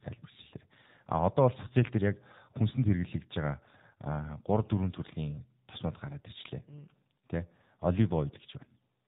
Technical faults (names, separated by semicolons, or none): AMR narrowband mobile codec; AMR bit errors